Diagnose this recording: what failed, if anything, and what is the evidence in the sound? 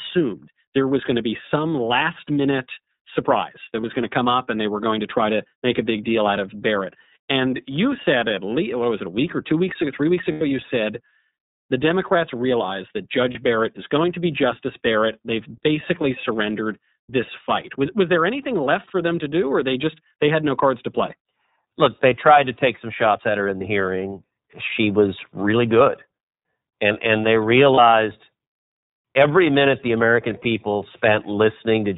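Speech throughout is band-limited, with nothing above 4 kHz, and has a rough, slightly synthetic edge. This points to the iLBC codec at the codec stage, in its 13.33 kbps mode with 30 ms frames. Each frame's excitation is coded independently, and its narrowband design removes the upper spectrum.

Brief held, buzzy vowel-like patches replace the audio at 3.81, 10.32 to 10.42 (after "weeks ago three weeks", before "you said"), 13.32 (after "realize that"), 23.58 and 27.74 s (after "and they"). These are lost iLBC frames, a network fault. The decoder repeats the last pitch cycle mixed with noise. The 90 ms gap fits three lost frames and the others one each.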